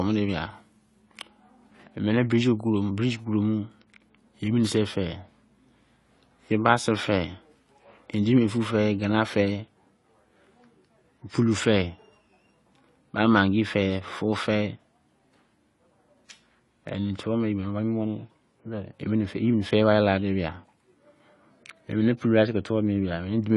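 From the start of the speech, there is plainly audible AAC compression: nothing survives above 11.4 kHz, and the band below carries the smeared, warbling texture of coarse quantisation, heard on sibilants. The likely cause is AAC-LC encoding at a low rate, which fits a bitrate around 32 kbps. Unlike a simple treble loss, this leaves a hard cut-off edge and an unstable, fizzy grain that no equaliser would produce.

From 1.0 s to the end, de-emphasis applied wrongly adds a smooth, steady treble roll-off, about 8 dB down at 10 kHz against 1 kHz. A treble cut meant to undo pre-emphasis was applied to audio that either had none or had already been corrected, so the top end is pulled down when it should not be. The sound becomes duller and more muffled, but it does so evenly, without the abrupt edge or warbling that mark the codec damage.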